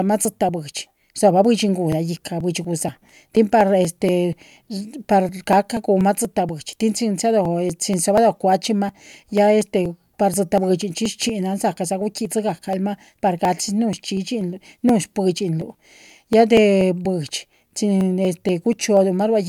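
From 0.25 s to 19.21 s the speech carries periodic USB or driver dropouts. Every 0.24 s, about 10 ms of audio is skipped outright, some seventy times. A stalled bus or driver causes this. Each gap is a regular tick, heard only during sound.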